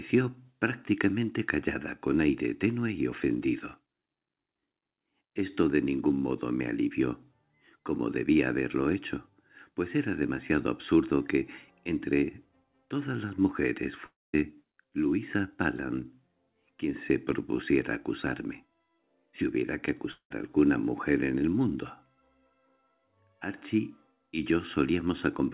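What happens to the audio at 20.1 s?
At 20.11 s the stream likely suffers a long network dropout: audio stops arriving until 20.32 s, and about 0.2 s of it is never played. The receiver stretches the last sound it had into a buzzy, fading fill lasting roughly 0.19 s, which decays into about 0.09 s of silence. The audio then resumes further on, jumping past the lost portion rather than picking up where it broke off.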